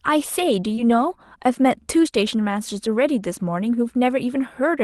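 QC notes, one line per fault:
0.75–0.79 s, short concealed packet loss: about 20 ms of audio failed to reach the decoder in time, so the receiver extended the preceding sound, from its pitch or as shaped noise, then blended back, leaving a brief smear or wobble where a short consonant can vanish.
0.77–0.79 s, lost packet rebuilt from error correction: a lost 20 ms stretch, consistent with a single frame, was recovered from the low-bitrate Opus copy carried in the following packet. No gap is heard, but this span sounds rougher and noisier than the surrounding audio, which is band-limited at 12 kHz.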